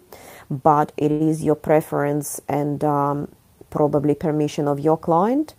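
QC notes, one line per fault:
1.11–1.22 s, short stall from a late packet: the jitter buffer ran dry waiting on a late packet, so the last sound stretches 87 ms, then resumes with nothing lost.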